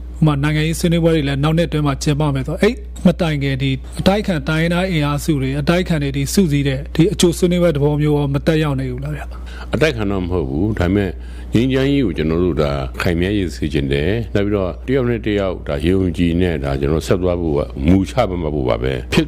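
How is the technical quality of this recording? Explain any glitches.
The recording has one fault: mains hum runs through the whole clip. A steady low tone sits at 60 Hz, with some weaker low harmonics above it, at roughly 15 dB below the wanted sound. It comes from the power line coupling into the signal path, typically through a ground loop between connected equipment or from a nearby transformer's magnetic field, and it does not vary because the supply frequency is fixed.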